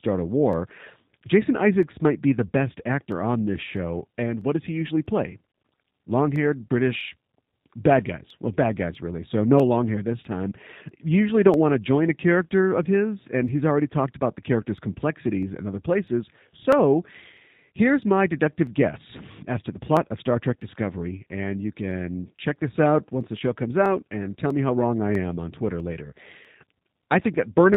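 G.729 codec damage runs throughout the speech, plainly audible. Everything above 4 kHz is gone, and the roughness points to an 8 kbit/s G.729 coder, which rebuilds each 10 ms frame from a vocal tract filter, a pitch predictor and a few pulses, leaving a synthetic edge.

Clock drift buffer slips recur from 0.53 s to 27.74 s, about 40 of them, every 0.65 s. Each is a regular click. The likely cause is two clocks disagreeing by roughly 500 ppm, so the buffer between them drops or repeats a block of around 15 samples each time.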